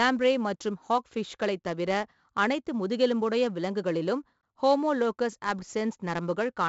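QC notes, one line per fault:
throughout: 4-bit ADPCM compression. Coarse 4-bit steps leave heavy gritty hiss riding every loud syllable. Nothing above 7.7 kHz, which fits a 64 kbps stream.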